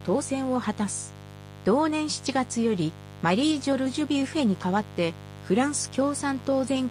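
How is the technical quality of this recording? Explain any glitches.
The recording carries mains buzz for its full length, sitting fairly high beneath the sound. Switching spikes from a dimmer, rectifier or poorly shielded cable enter twice per 50 Hz cycle, spreading harmonics into the kilohertz range and producing a steady, raspy buzz.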